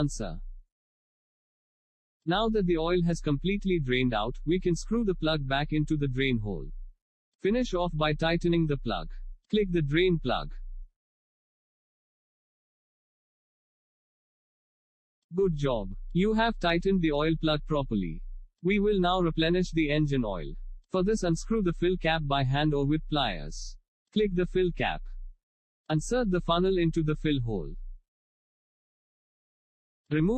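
Across the whole clip the sound is dull and gurgling, with granular grit and upper bands flickering in and out, likely MP2 compression at a low rate around 80 kbps.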